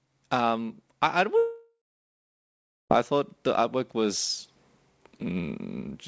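A speech clip with a long network dropout, likely the cause of the gap from 1.38 to 2.92 s, between "I I" and "I thought the artwork". The last sound is stretched into a fading buzz, then about 1.1 s of near-silence follows before the audio resumes with that section lost. On a waveform it appears as a decaying smear and then a flat line. The spectrogram shows nothing above 8 kHz throughout, which fits a wideband call codec.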